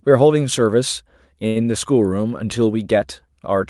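From 1.47 to 1.58 s there is a short stall from a late packet: the jitter buffer ran dry and the last sound was stretched for about 82 ms, giving a held sound with a slight buzz or dip. Unlike a loss, nothing is skipped. The speech resumes exactly where it paused, just 82 ms later.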